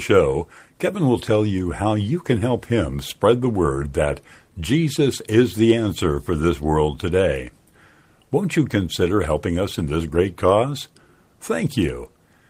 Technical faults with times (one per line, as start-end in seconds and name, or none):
none